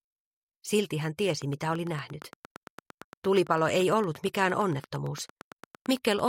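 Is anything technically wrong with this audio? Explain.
Yes. From 1.30 to 6.20 s, a regular train of clicks ticks over the sound at 8.8 per second, around forty peaking about 5 dB above it, likely interference or a faulty connection.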